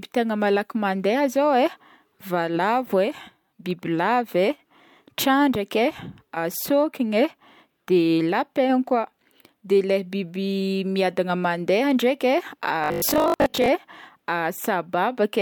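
A speech recording with one fault: robotic sound from repeated short buffers between 12.84 and 13.68 s. Over that span the voice collapses into a rigid, metallic buzz at 50 Hz that only loosely tracks the speech, with most of the underlying audio replaced by repeats. The likely cause is audio arriving too slowly, so playback loops the last chunk, and a 50 Hz buzz fits a chunk roughly 20 ms long repeated while the real signal is dropped.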